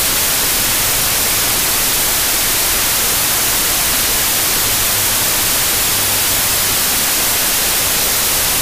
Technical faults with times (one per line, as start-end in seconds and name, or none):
0.00-8.62 wrong sample width